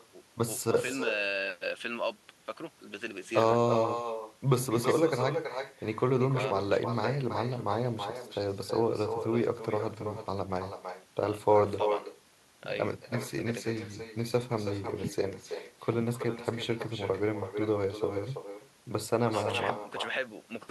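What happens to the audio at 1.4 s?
Echo with no canceller is present at 1.4 s, as it is throughout the clip. The far end's loudspeaker feeds its microphone and nothing removes it, so each phrase returns roughly a third of a second later as a thinner copy about 8 dB quieter.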